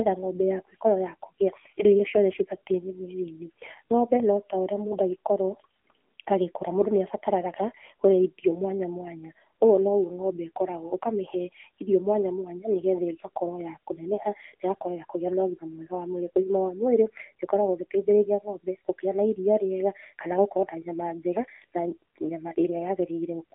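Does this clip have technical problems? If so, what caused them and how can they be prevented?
Yes. Throughout, the speech carries AMR narrowband mobile codec damage: a buzzy, synthetic quality within a 250 Hz to 3.4 kHz band, with nothing above 3.6 kHz. That texture sets it apart from a plain telephone filter, and fits a low mode near 7.4 kbps. Prevention: record or transmit over a wideband or higher-bitrate path.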